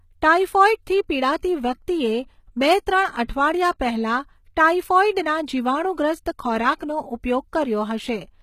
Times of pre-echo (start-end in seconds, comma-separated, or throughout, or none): 3.24-3.29